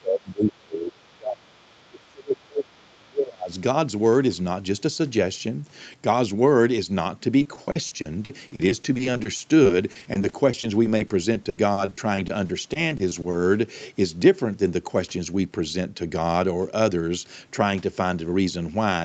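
Speech that keeps sinking or breaking up from 0 to 1.58 s and again from 1.76 to 3.52 s, falling by as much as about 30 dB for roughly a second and a half in each stretch. This is likely speech suppressed in double talk: the echo canceller, unable to tell the talker from loudspeaker echo while both sides spoke, turned everything down. Faint scraps of a second voice appear at 0.52–0.57 s and 1.6–1.65 s, very quiet, around 40 dB below the speech. This is probably the other side's voice leaking through, loudspeaker playback that the echo canceller failed to fully remove from the microphone. From 7.39 to 13.35 s the sound turns choppy and robotic, with dozens of brief holes, the longest 80 ms, and about a fifth of the stretch patched over. That points to repeated packet loss, where each missing piece is filled by stretching the previous sound until the next loss arrives. Throughout, the sound stops at 8 kHz, consistent with the Opus call path.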